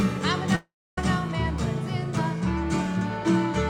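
From 0.55 s to 0.98 s the audio breaks off. The last sound is stretched into a buzzy hiss that fades away. About 0.29 s of near silence follows. The audio then resumes further on, with about 0.42 s of material missing. This is likely a long network dropout. Data stopped arriving, the receiver filled the gap by extending the last sound until it decayed, and playback jumped ahead once the stream returned.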